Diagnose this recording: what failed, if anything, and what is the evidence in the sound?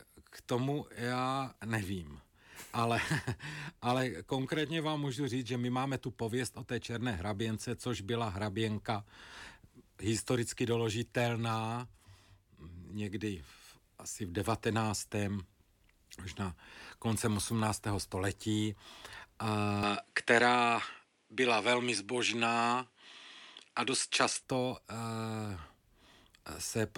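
The capture path, at the driver or device-routing stage, likely switched to a poorer input device from 19.83 s to 24.43 s. Across that stretch the speech loses all content above 10.8 kHz, so it sounds duller, and its level shifts by about 5 dB. A different background noise appears, roughly 50 dB below the speech. There is no gap at either switch, and the brighter original sound returns at 24.43 s.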